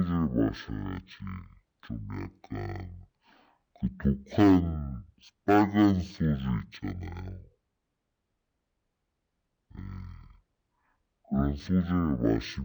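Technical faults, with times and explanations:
Throughout: stereo read as mono. The speech runs at half speed and sits a full octave low, because left and right samples that should play side by side are being read in sequence as one channel, so each moment of sound takes twice as long to get through. Stretching the interleaved pairs this way also folds a fainter mirror copy of the sound into the upper half of the spectrum.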